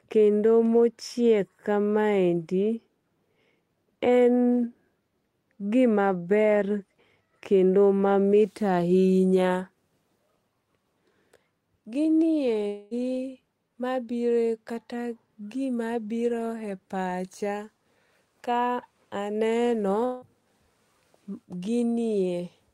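At 12.67 s the speech gives way to a buzzy, smeared continuation of the last sound. It runs to 12.94 s, about a quarter of a second. The speech then resumes, with that stretch missing. The likely cause is a long network dropout, with the receiver filling the gap by extending what it last had. The same happens at 20.05 s, right after "ka aneno". It lasts about 0.2 s, to 20.25 s. Neither gap falls to silence.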